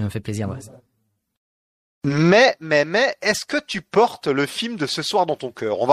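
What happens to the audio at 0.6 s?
MP3 compression artefacts are present at 0.6 s, as they are across the whole clip. The cause is likely MP3 encoding at a low bitrate, fitting about 64 kbps. With too few bits, the encoder drops quieter frequency components, and these flicker in and out from one frame to the next. The result is plainly audible: the speech takes on a watery, swirling texture, with metallic chirps on s sounds and smeared onsets.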